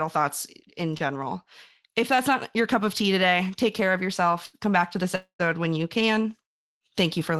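A speech recording over a call link, and you can hear the network hiccup three times. At 0.97 to 1.02 s, right after "thoughts in", there's a short concealed packet loss: about 20 ms never arrived, so the decoder stretched the preceding sound over the hole and blended back in, leaving a quick smear. At 4.46 to 4.55 s, after "today take care of", a burst of packet loss takes out about 80 ms. The receiver carries the last sound forward and lets it fade before the audio picks up again, so that bit sounds like a brief held buzz or fading hiss with a chunk of speech simply gone. The biggest one sits between "back to this" and "when you can", from 5.15 to 5.41 s. Roughly a quarter of a second is missing, heard as a fading continuation of the previous sound that drops into about 110 ms of near silence before speech resumes. That's likely a long network dropout rather than anything at the source. 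Under all of this the audio has the coded texture and 12 kHz top end of a WebRTC call path, which fits Opus at a modest bitrate.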